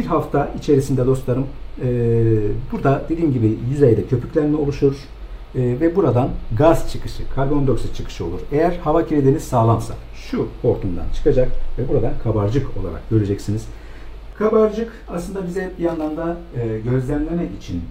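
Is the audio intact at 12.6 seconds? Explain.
Yes, at 12.6 seconds the audio is intact, with no dropout, click, distortion or other fault audible at that point.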